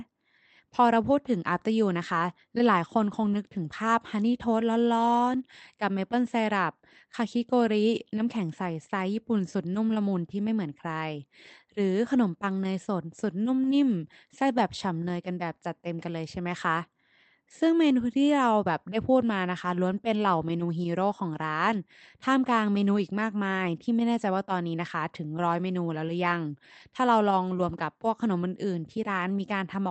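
No technical faults are audible.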